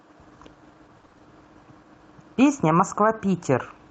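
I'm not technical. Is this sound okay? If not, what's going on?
No. From 0.97 to 1.21 s there is repeated packet loss (robotic sound): pieces of the call data kept going missing, about six short holes of around 20 ms each. The system patched each hole by stretching the sound before it, so half of that stretch is patched and the speech turns choppy and robotic.

At 2.67 to 2.73 s, a lost packet was rebuilt from error correction. The missing piece, which fits two lost packets, was rebuilt from a rougher backup copy carried in the data that followed. There's no gap, but those 40 ms sound rough and noisy.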